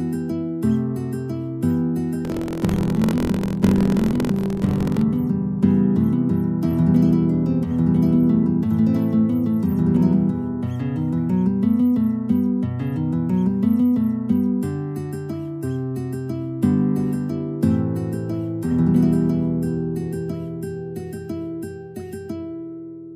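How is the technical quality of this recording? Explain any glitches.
There's one clear glitch, and it's buffer tearing, from about 2.23 s to 5.03 s. The writer and reader of the playback ring buffer have drifted so their positions cross inside each period, leaving roughly a tenth of every buffer filled with audio from about 50 ms earlier, with hard joins either side. You hear it as a steady robotic buzz near 43.1 Hz while sound is present, which fits a 1024-sample buffer.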